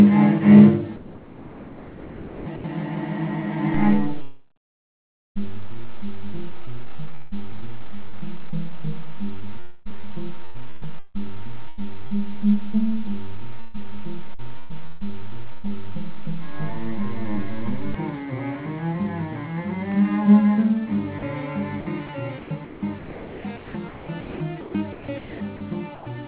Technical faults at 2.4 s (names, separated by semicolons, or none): sound chopped by the voice detector